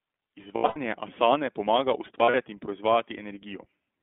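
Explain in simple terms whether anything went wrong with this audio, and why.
Yes, two related things went wrong in this speech.

The whole clip has passed through the iLBC codec, a low-bandwidth internet-telephone format that chops sound into 20 ms slices and codes each one on its own. Everything above about 3.5 kHz and below about 250 Hz is gone, so it sounds like a phone call, and the voice is plainly rough and slightly synthetic. A simple phone filter would sound muffled but still natural. This graininess comes from the codec rebuilding the voice.

On top of that there are lost iLBC frames, where pieces of the stream never arrived. From 0.56 to 0.78 s, just before "asane pomaga", losses scattered over about 0.2 s, fitting roughly nine missing 20 ms slices, with the longest gap about a tenth of a second. From 2.19 to 2.36 s, just after "asane pomaga", there is a shorter patch. The decoder fills each gap by repeating the last bit of voice mixed with noise, so you hear a brief held, buzzy vowel rather than silence or a click, and the voice snaps back right away.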